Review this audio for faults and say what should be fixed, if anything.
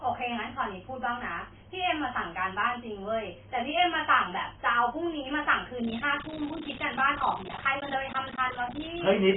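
The speech was likely squeezed through AAC compression at a very low bitrate, around 16 kbps. Nothing remains above 3.8 kHz, so throughout it sounds dull, smeared and warbly. Encode at a higher bitrate to keep the top end and avoid the spectral holes.

From 5.84 s to the end, mains buzz appears: switching spikes on a 60 Hz supply leak in, adding a raspy buzz about 15 dB below the speech. Shield and ground the cabling, and keep dimmers and cheap supplies off the recording circuit.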